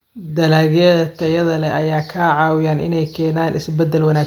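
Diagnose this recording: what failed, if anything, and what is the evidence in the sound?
Nothing failed; no fault is audible anywhere.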